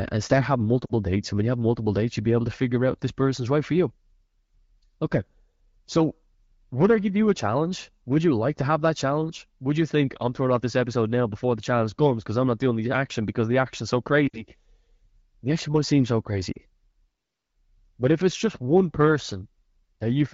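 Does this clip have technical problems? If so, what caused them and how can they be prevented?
Yes. Lost AMR speech frames occur at 0.85–0.92 s after "and start having", 14.27–14.43 s after "because the action's so", and 16.51–16.58 s after "action might seem so". Each is a gap of about 40 to 60 ms, which fits two or three corrupted 20 ms frames. The wideband decoder (the HD Voice codec itself comes through cleanly) fills each gap by repeating the last good pitch and vocal-tract settings at falling gain, so the speech briefly smears and dips before recovering. Stronger radio coverage, better channel coding or retransmission, and a more robust AMR-WB mode on poor links would prevent these dropouts.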